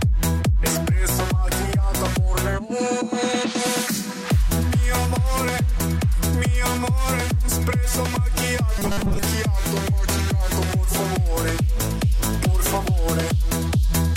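Robotic sound from repeated short buffers from 8.78 to 9.22 s: a rigid 200 Hz buzz, likely from audio arriving too seldom, with roughly 5 ms segments looped over most of that stretch.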